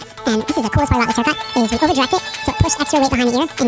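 Throughout, everything plays twice as fast and 12 semitones higher: a wrong sample rate, which fits 8 kHz audio played back at 16 kHz unconverted.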